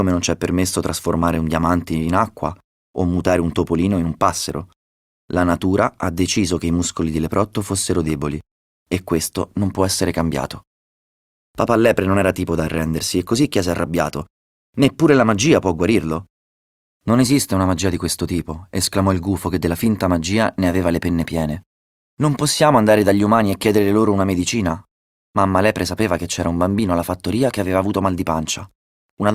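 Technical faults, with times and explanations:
No technical faults, with times and explanations, to report for this speech clip.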